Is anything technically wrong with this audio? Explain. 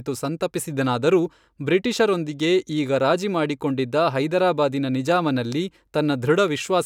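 No, nothing technically wrong can be heard anywhere in this speech recording.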